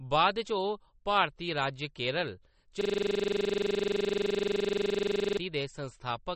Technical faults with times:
0.00-6.35 MP3 compression
2.81-5.38 system hang loop

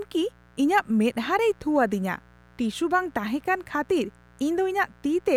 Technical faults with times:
0.00-5.37 mains buzz

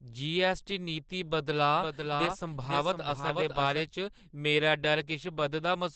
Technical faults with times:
0.00-5.96 Opus compression
1.76-3.80 doubled audio track

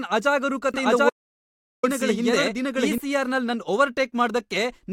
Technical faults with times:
0.74-2.98 doubled audio track
1.10-1.83 audio dropout to silence

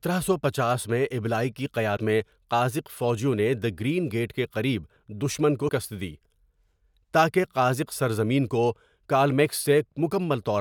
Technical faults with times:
1.93-1.98 damaged data in a compressed stream
5.65-5.70 damaged data in a compressed stream

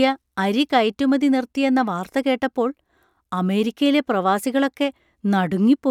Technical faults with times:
none

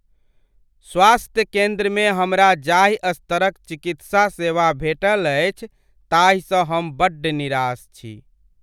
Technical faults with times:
none

